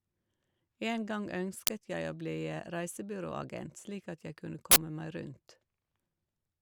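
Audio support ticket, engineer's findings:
Harsh, loud crack at 1.67 s and loud digital noise burst at 4.71–4.76 s. Uninitialised buffer: stale memory played as samples, fitting 512- and 2048-sample blocks.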